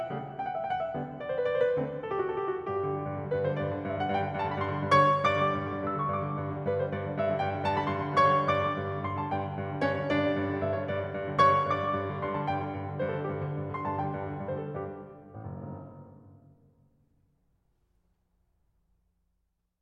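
Listening through this music recording, nothing stood out as a technical fault at any point.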